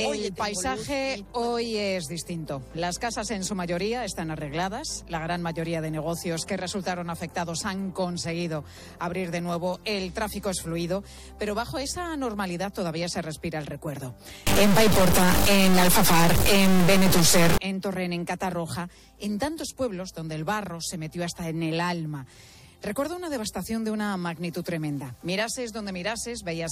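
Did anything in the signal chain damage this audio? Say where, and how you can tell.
Yes. From 14.47 to 17.58 s the sound turns into a buzzy, gritty distortion that rides on the waveform, and the quieter stretches fill with noise instead of going clean. That points to a likely stuck bit at the converter or on a data line feeding it. One bit is pinned, so about half the samples get knocked off by a fixed step of roughly -15 dBFS. The bit also flips around the zero crossing, which is why the gaps get noisy.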